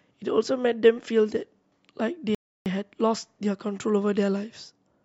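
A rebuffering stall interrupts this speech clip from 2.35 to 2.66 s. The playback runs dry because the player has exhausted its downloaded audio, so the sound drops to silence and waits for more data before continuing from the exact point where it halted. No speech is skipped or repeated. The gap simply inserts 0.31 s of dead air, stretching the recording's timeline by that amount.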